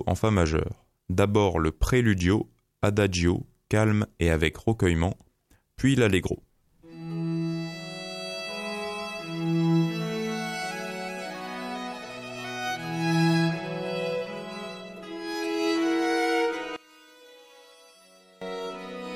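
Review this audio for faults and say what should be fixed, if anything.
From 16.76 to 18.42 s the sound drops by about 22 dB, likely one channel inverted, cancelling shared content when the channels are summed to mono. Check and match channel polarity before any mono fold-down.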